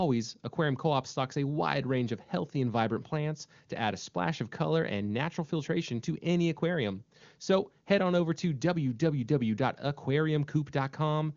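Speech over the AMR wideband (HD Voice) codec at a quality consistent with its top 23.85 kbit/s mode; no technical faults to report.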